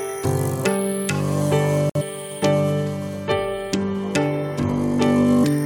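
There's a gap at a join of encoded pieces at 1.90 to 1.95 s: a roughly 57 ms hole of silence drops into otherwise continuous sound, with smeared edges, then it resumes right where it left off. That's untrimmed encoder delay and end padding left in at the splice.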